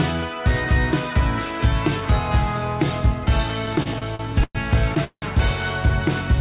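From 3.66 to 4.57 s the audio shows repeated stalls (stutter): about eleven short holds, totalling roughly 266 ms and the longest 111 ms, fill around 29% of that stretch. Packets kept arriving late, so the jitter buffer repeatedly emptied and the receiver stretched the last sound each time. Nothing is lost, but the passage drags and hiccups rather than halting once.

At 5.04 to 5.24 s a single call audio freeze follows. The sound hangs for about 178 ms as a fading continuation of the last moment, sinking into roughly 60 ms of silence, then resumes exactly where it stopped. Unlike the stutter, this is one longer hold, likely from a burst of packets held up in transit. Throughout, the audio is limited to the telephone band, with nothing above 4 kHz.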